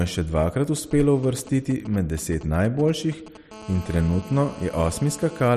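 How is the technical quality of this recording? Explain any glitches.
The recording is marred by interference from a nearby 2G mobile phone, heard in two phases across almost the whole clip.

From 0.77 to 3.37 s there are GSM signalling bursts. The phone is exchanging brief control transmissions with its network, and some part of the audio chain is rectifying those radio pulses into the signal. The result is a galloping dit-dit-dit of short buzzes at about 217 Hz, sitting roughly 20 dB under the speech. It is intermittent, with nothing to do with what is being said.

From 3.51 to 5.48 s this becomes GSM phone buzz. The phone has moved into an active call and now transmits continuously in bursts 217 times a second. The rectified pulse train produces a hard, raspy 217 Hz buzz with a dense stack of harmonics, about 18 dB below the speech. Unlike the earlier bursts, it is nearly steady and runs underneath the speech without following it.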